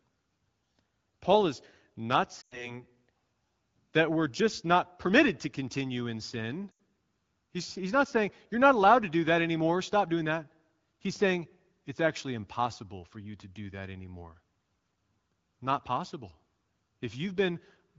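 At 2.41 to 2.81 s, just after "is not", there's a burst of lost AMR speech frames. Radio errors knocked out about 100 ms of audio, so the decoder reused the last good pitch and vocal tract settings while fading the gain, and the sound drops to near silence within two frames. The same thing happens at 6.71 to 6.79 s, after "to continue in sin", as a shorter 80 ms drop to near silence over the otherwise clear AMR wideband speech.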